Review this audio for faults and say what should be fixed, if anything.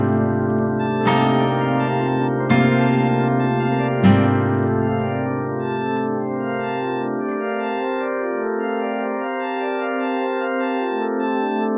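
Nothing here needs fixing, since no technical faults turn up anywhere in these sounds, so the audio can stay as it is.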